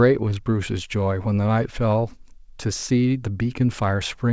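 No faults present; the speech carries through the call path with nothing above 8 kHz, which fits a wideband codec such as G.722.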